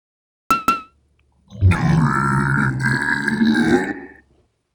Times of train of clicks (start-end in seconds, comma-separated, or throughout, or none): none